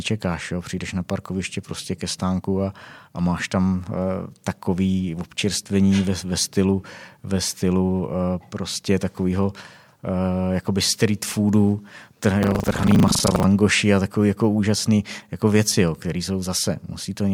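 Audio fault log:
12.4–13.45 s, buffer tearing: writer and reader slipped in the ring buffer, so about a third of each period replays older audio, causing a 25 Hz robotic rattle.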